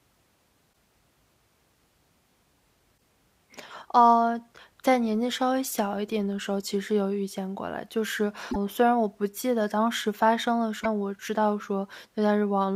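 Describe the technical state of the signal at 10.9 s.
Just before that moment, from 10.80 to 10.86 s, there is damaged data in the compressed stream. Corrupted bytes make the decoder misread those frames and lose sync while it hunts for the next valid frame header. The result is a brief chirp or blip.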